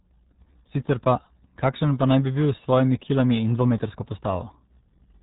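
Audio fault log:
throughout, RealAudio 14.4 codec: The speech has been squeezed through the RealAudio 1 (14.4) speech codec, whose heavy damage fits an 8 kbit/s stream built for dial-up modems. To reach so low a rate, the coder discards everything above about 3.8 kHz and rebuilds the rest from a coarse model of the voice. The missing top end leaves the speech muffled, and the crude resynthesis adds a gargly, bubbling roughness to every syllable.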